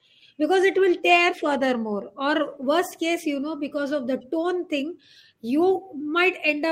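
Lost packets rebuilt from error correction, 0.73 to 1.19 s: low-bitrate copies carried in following packets fill the losses, about 240 ms in total, so there is no gap, but the speech turns rougher and noisier.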